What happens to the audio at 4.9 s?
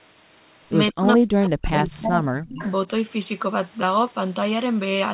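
Nothing goes wrong at 4.9 s: the speech there comes through intact, with only the narrow, telephone-like band of the call codec that runs through the whole clip.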